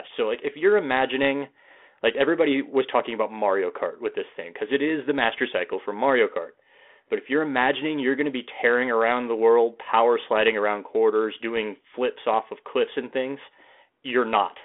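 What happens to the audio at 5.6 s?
Nothing goes wrong at 5.6 s: the speech continues intact through that moment, carried on the same 32 kbit/s G.726 ADPCM telephone line as the rest of the clip.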